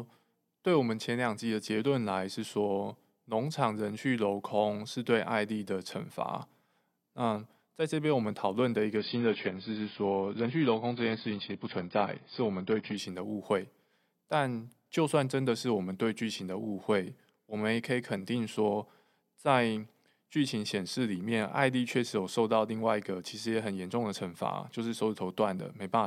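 From 8.97 to 12.97 s the speech abruptly loses everything above about 5 kHz and takes on a smeared, synthetic edge, with no gap at either switch. That points to an adaptive stream at a lower bitrate, dropping from roughly 96 to 16 kbit/s for those four seconds.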